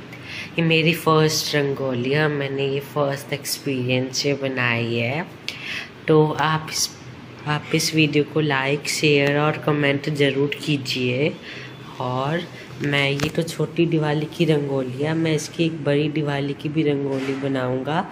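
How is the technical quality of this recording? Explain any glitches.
The recording has two short glitches of the same kind. Compressed frames are skipped at 0.95 to 0.99 s and again at 7.13 to 7.15 s. Each time, a block of encoded audio never reaches the output, either because it is missing from the file or because the decoder rejected it as damaged. Playback jumps forward by about 50 ms, which fits a single lost 46.4 ms frame.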